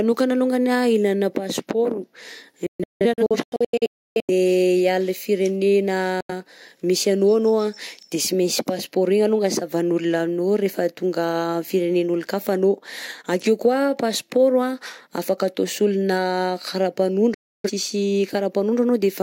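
A receiver losing the digital signal, or rejecting frames that failed their checksum, causes the digital broadcast dropout heard in this speech clip. The receiver mutes with a roughly 3 ms fade, so the speech snaps to silence. From 2.66 to 4.30 s it breaks into several holes totalling about 1 s, the longest 0.3 s. A 0.09 s hole follows at 6.21 s, and a 0.3 s hole at 17.34 s. The programme sent during each gap is lost.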